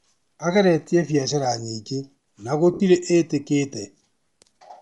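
A grainy, breathy edge runs through the whole speech recording, with the upper frequencies sounding hollow and filled with hiss instead of clear detail. The likely cause is Bluetooth LC3 compression, the transform codec of LE Audio, working at a modest rate, which fits roughly 48 kbps in 10 ms frames. At that rate the encoder drops much of the high spectrum and substitutes shaped noise, so the damage is plainly audible on every stretch of speech. At 2.74 s, right after "biacara nyingĩ na", the sound briefly turns into a rough, noisy smear for about 60 ms, until 2.80 s. These are lost LE Audio frames. The gap fits six missing 10 ms frames, which the decoder concealed by repeating the last received spectrum with scrambled phase signs. That keeps the energy roughly in place but destroys the detail, so the speech there becomes a short burst of textured noise rather than a clean dropout.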